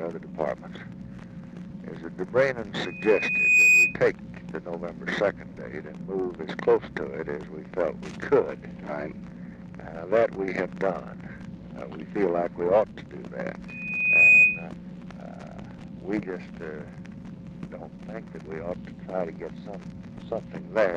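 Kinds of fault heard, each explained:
Loudspeaker feedback squeal: A microphone picks up its own loudspeaker, and the loop runs away at one frequency. Here a 2.5 kHz tone swells within under a second into a squeal, roughly 15 dB over the sound. It occurs at 2.85 to 3.97 s and 13.68 to 14.67 s.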